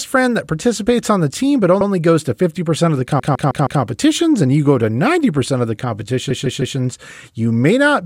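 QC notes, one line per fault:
1.81–1.88 s: repeated frames. A 78 ms block plays twice, which fits three compressed frames being written or sent again. The decoder replays identical data, so the audio briefly stutters.
3.19–3.82 s: repeated frames. A 157 ms block, pointing to six frames, plays five times in total, adding 627 ms and causing a rapid stutter.
6.30–6.77 s: repeated frames. The same 157 ms block length plays four times, adding 470 ms, with the same stutter.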